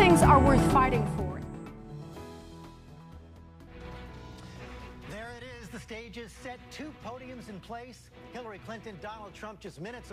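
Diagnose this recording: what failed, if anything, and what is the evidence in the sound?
Nothing failed; no fault is audible anywhere.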